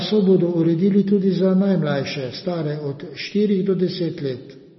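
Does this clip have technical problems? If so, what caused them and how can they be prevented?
Yes, the whole speech clip sounds swirly and watery, with nothing above 5.9 kHz, likely MP3 compression at a very low bitrate, around 24 kbps, which dropped the treble and left weak detail flickering. Export at 128 kbps or higher, or keep a lossless copy.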